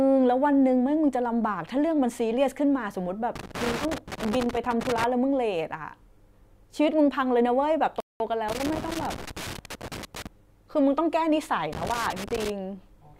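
Speech recording with two kinds of fault. Loose connector crackle appears in three irregular bursts, from 3.36 to 5.04 s, from 8.49 to 10.27 s and from 11.73 to 12.50 s. Each is a rough scratching and crackling laid over the speech, where a worn or dirty contact is making and breaking rapidly so the signal is chopped on and off in uneven fragments. The bursts come and go unevenly rather than at any fixed rate. Between 8.00 and 8.20 s there is a playback stall: the audio cuts to silence for about 0.2 s in mid-flow and then resumes. The likely cause is the player running out of buffered data or its output thread being blocked briefly, so nothing reached the output until it recovered. The second crackle burst follows shortly after.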